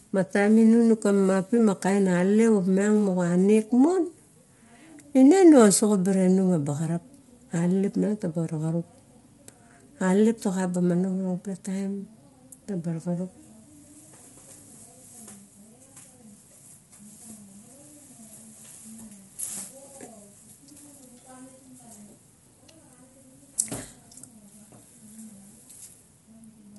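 Low-delay AAC compression runs throughout this speech clip, likely AAC-ELD at a bitrate that fits about 32 kbps. Its short frames resolve voice harmonics poorly, so the speech sounds plainly rough and grainy, and nothing is present above 11.6 kHz.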